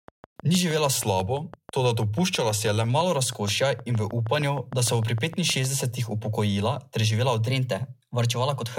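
A train of clicks runs from 0.08 s to 5.66 s: about forty sharp, near-identical ticks at a regular 6.4 per second, peaking roughly 5 dB above the speech and audible in the gaps between phrases. A pulse repeating this steadily most likely comes from electrical interference from nearby equipment or a faulty connection or power supply, rather than from anything in the recording itself.

A drift correction step starts at 0.96 s and lasts until 2.90 s. The speech slows by 6.27% and drops 112 cents, just over a semitone, then snaps back to normal. A second step from 7.47 s to the end runs 6.27% fast and 105 cents sharp. Each was likely caused by clock-matching software abruptly changing the playback rate to refill or drain its buffer.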